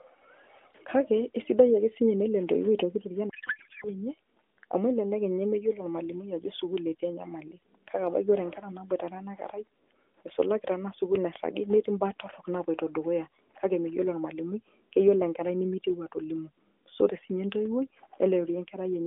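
From 3.30 to 3.88 s, a codec payload misread turns the speech into garbled warble. The AMR frames' bit packing was likely misinterpreted.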